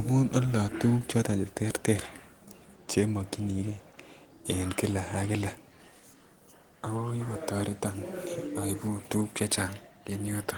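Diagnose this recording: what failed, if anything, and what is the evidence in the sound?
Nothing failed: the speech comes through its Opus voice coding with the full band intact up to about 20 kHz and only a light coding texture, and no stage from capture to playback leaves any audible defect.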